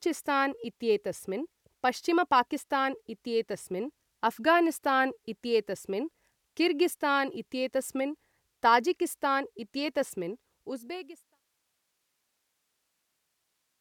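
Speech, no faults detected, with a smooth editorial fade-out beginning around 10 s and reaching silence at 11.42 s.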